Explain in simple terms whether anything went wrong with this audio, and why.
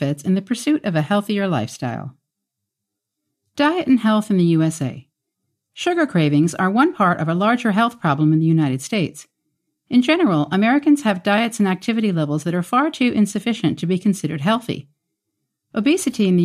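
Nothing went wrong here.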